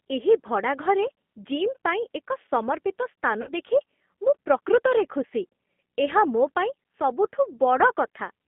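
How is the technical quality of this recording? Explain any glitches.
The quality is limited by a narrowband speech codec, with one short dropout. The whole recording has been through the G.729 codec. It is confined to a telephone band of about 200 Hz to 3.5 kHz. Speech is rebuilt from a vocal tract filter and a few pulses per frame, which fits an 8 kbit/s stream. The result sounds plainly rough, thin and slightly synthetic.

From 3.42 to 3.53 s there is VoIP packet loss concealed by the speech codec. About 50 ms of audio went missing. The decoder filled the gap by repeating its last pitch and filter at falling gain. This gives a brief buzzy or noisy, fading smear. Speech stays weak until the frames rebuild.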